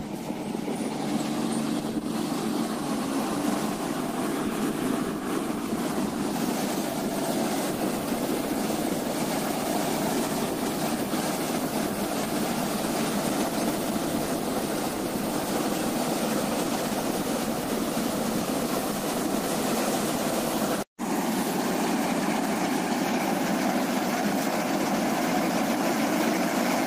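Nothing stood out on listening to this recording.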